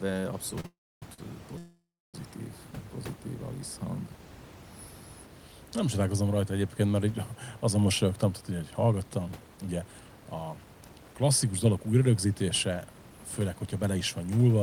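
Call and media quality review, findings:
Short stall from a late packet, 0.60–0.65 s and 1.14–1.19 s. Last sound held about 37 ms, then about 44 ms, with a faint buzz before speech resumes at the same point. Jitter buffer underran while a packet was late. The receiver stretched the audio until it arrived, adding equal delay. No content lost.

Call audio freeze, 0.66–1.03 s and 1.58–2.15 s. Sound continues as a fading buzz, then silence: about 0.27 s of the first 0.37 s and about 0.28 s of the second 0.57 s. Speech resumes where it stopped, nothing missing. Likely packets held in transit, emptying the jitter buffer. Concealment inserted 357 ms and 557 ms of delay.

Jitter buffer speed-up, 7.78–14.14 s, beginning just after "rajta egyébként mert így". Speech runs about 9% fast at unchanged pitch and sounds hurried. After the earlier stalls the buffer held more audio than its target, so the receiver cut short pitch-period slices repeatedly, roughly 0.7 s in total, to reduce delay. 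Room noise sits about 20 dB below speech and is part of the recording.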